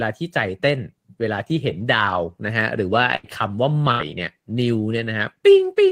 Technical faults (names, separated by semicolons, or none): burst of packet loss